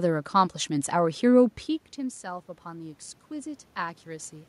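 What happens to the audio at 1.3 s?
Around 1.3 s the speech is intact, with no dropout, glitch or distortion to be heard, only the background noise of the room.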